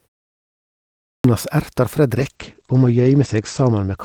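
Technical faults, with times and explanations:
1.01 s, clipped start after a pause: after a second of silence the device was still waking, so about 0.23 s of the next sound is missing and it starts abruptly.
2.18 to 4.05 s, call bitrate drop: the top end falls from 20 kHz to 8 kHz and the sound turns rough and muffled, which fits the encoder falling from about 40 to 12 kbps.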